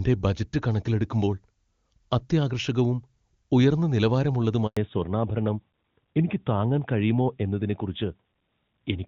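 At 4.67 s the speech cuts out in a handover gap. The call is switching networks, and no speech frames arrive for 100 ms, until 4.77 s. The voice fades within a few tens of milliseconds. Then there is plain silence, and that stretch of speech is lost.

From 4.77 s to the end comes a fallback to narrowband. Before this, the HD Voice sound is clear, which fits AMR-WB at its top rate. Afterwards nothing above 4 kHz remains, which points to AMR-NB at 12.2 kbit/s. The voice turns duller, muffled and rougher.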